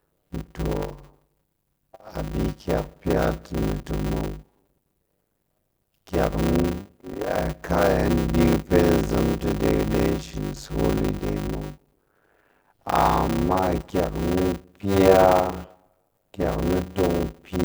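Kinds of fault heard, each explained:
Block size mismatch (padded): Short blocks are zero-padded to a longer read size. This adds a steady 100 Hz buzz. The speech runs at 0.533 times speed but keeps its timbre.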